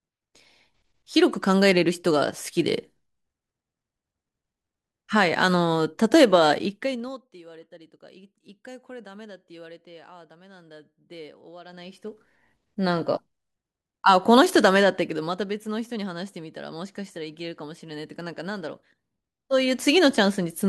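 From 6.61 to 7.25 s the speech drops by roughly 25 dB, and the fade comes with zipper noise. The gain falls in hard 2 dB steps, about twenty a second, with nothing smoothing between them, so each jump leaves a tiny click. You hear a fast ticking that rides on the voice while it ducks. The same thing happens in reverse from 11.65 to 12.29 s, when the level climbs back up by about the same amount.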